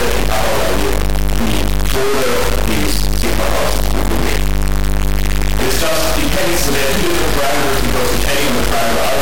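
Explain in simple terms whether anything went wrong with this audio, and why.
Integer read as float ruins the whole clip. Whole-number samples were read as decimal numbers, so the sound becomes a harsh, extremely loud buzz from start to finish.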